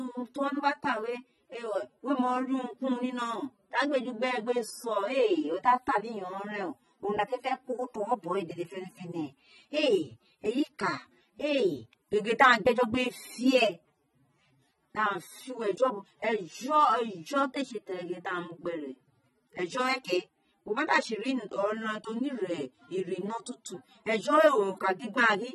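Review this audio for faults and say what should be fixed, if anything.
AAC compression throughout: the speech is dull and smeared, with nothing above 12 kHz, likely from AAC-LC quantising coarsely at a low bitrate, roughly 24 kbps. Prevent it by exporting at a higher AAC bitrate or keeping a lossless master.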